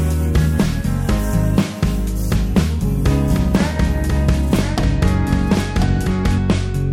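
From 3.28 s to 6.38 s a second copy of the sound plays alongside the first, trailing it by about a second and sitting a few decibels below it. The copy is full-band and dry, with no decay or room colour, and it cuts in and out abruptly at both ends. This doubled audio track most likely comes from the same signal being captured again through a slower path and mixed back in.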